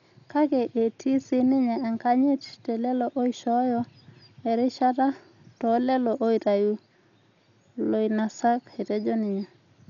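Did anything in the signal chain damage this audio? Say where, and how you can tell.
Yes, at the codec stage. The speech sounds dull throughout, with nothing above about 7.1 kHz and a rough, fluttering noise around voiced sounds. That's likely heavy Dolby Digital compression, which fits roughly 48 kbps: a narrowed band and starved lines filled with dither noise.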